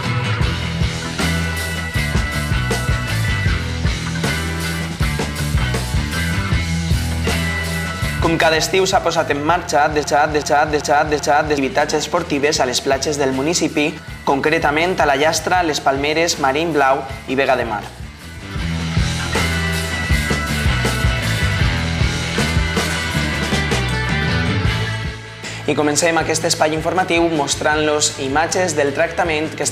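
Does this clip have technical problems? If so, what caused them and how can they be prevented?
Yes. From 10.04 to 11.58 s, a broken-record loop plays. A 386 ms fragment repeats exactly, back to back, four times. The intended sound is lost. A stalled player or stream likely resent its last fragment. Larger buffering and stall detection prevent it.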